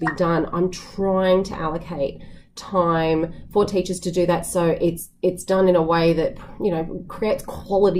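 No technical faults are audible anywhere in this audio.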